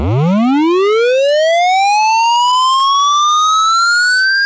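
Everyday sounds heard through a wideband call path with nothing above 8 kHz show repeated stalls (stutter) from 2.02 to 3.66 s: packets arrived late, the jitter buffer kept running dry, and the receiver stretched the last sound through dozens of brief gaps, none longer than 17 ms. About a third of that stretch is concealed, so the sound drags and stutters while nothing is lost.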